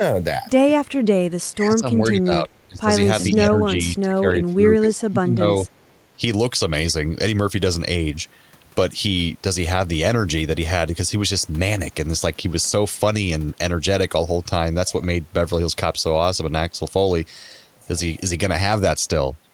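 From 1.51 to 2.49 s the speech dips and loses its brightness in patches, sinking by around 20 dB at worst. It dips again at 2.67 to 2.89 s, more gently at 3.29 to 3.46 s, and then for most of the stretch from 3.64 to 5.48 s. This is likely speech suppressed in double talk: with both sides talking at once, the echo canceller could not tell this talker from loudspeaker echo and turned both down.

At 2.5 to 2.6 s and again at 5.87 to 5.93 s, a very faint scrap of the voice returns 407 ms late, far below the live speech. That delayed copy is likely echo leak, where a loudspeaker's sound reached its microphone and the echo canceller let part of it through and back down the line.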